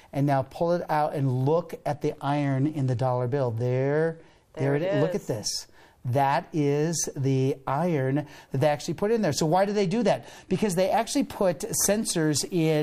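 A congested Bluetooth link forces two Bluetooth SBC bit pool drops, from 1.91 to 4.97 s and from 9.65 to 10.77 s, where the encoder apparently lowered its bit pool. The dulled treble and gritty quantisation noise point to roughly 99 kbps, which fits a pool cut from 31 to 14.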